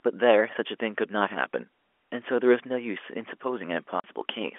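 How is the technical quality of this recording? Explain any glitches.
The speech carries a single dropout, heard against the narrow telephone band of G.711 coding.

At 4.00 s the sound cuts out for 40 ms, leaving a short silent hole with abrupt edges. This is packet loss filled with silence: part of the stream never reached the receiver, which played nothing in its place instead of concealing the gap. The hole's length fits two lost 20 ms packets.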